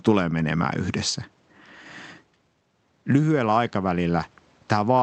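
Listening closely to the speech in the clip, nothing stood out as a technical problem.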